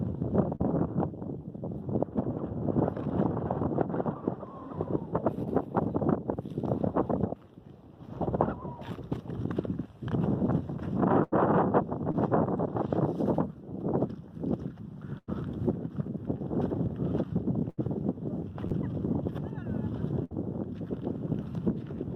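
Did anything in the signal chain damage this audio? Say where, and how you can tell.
Yes. The network stage dropped packets, causing short concealed packet loss at 0.55–0.61, 12.12–12.15 and 18.67–18.72 s. The decoder patched each gap of 20 to 40 ms by extending the preceding sound, leaving a brief smear or wobble before the real signal blends back in.

Longer runs of lost packets cause a burst of packet loss at 11.23–11.34, 15.18–15.29, 17.69–17.79 and 20.24–20.33 s, where 60 to 100 ms went missing. Concealment stretches the last sound into a fading buzz or hiss, and the audio picks up further along with that stretch gone.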